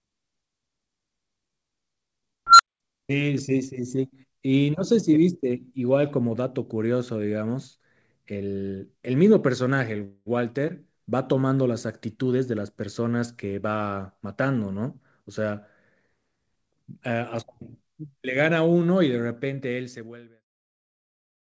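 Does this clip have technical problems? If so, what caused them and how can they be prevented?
Yes. An unstable filter appears from 2.47 to 2.80 s. A tone near 1.5 kHz swells over 126 ms and clips, then the output cuts to 210 ms of silence as the runaway recursion overflows. On a spectrogram it shows as a bright horizontal line that thickens before a blank gap. On the waveform it is an expanding envelope flattened where it clips, then a flat line. To prevent it, validate filter coefficients for stability and clamp or reset the filter state when its output diverges.

A call audio freeze occurs from 10.04 to 10.28 s, likely caused by delayed packets draining the jitter buffer. For 223 ms, a fading buzzy continuation of the last sound fills in, then the speech picks up exactly where it stopped, with nothing lost but 223 ms added delay. A spectrogram shows smeared, decaying repeated texture. 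The waveform shows a stretched, shrinking stretch of waveform. A larger or adaptive jitter buffer and a steadier network path would prevent it.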